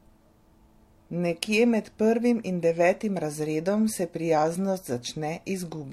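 Speech recording with no technical faults detected anywhere in the audio.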